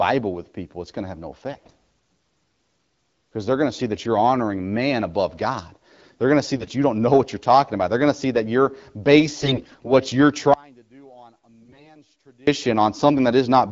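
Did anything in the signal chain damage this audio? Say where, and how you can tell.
Yes. AMR bit errors on the network link make the sound hoarse and gargly at 1.51–1.71 s after "going to have no", 6.56–6.70 s after "going to see", 9.41–9.92 s and 11.62–11.96 s. Flipped low-priority bits scramble pulse, pitch and gain values.

Audio dropout to a faint residue runs from 10.54 to 12.47 s, about 1.94 s. A faint sound about 30 dB down remains. The cause is likely a lost input while the path stayed live.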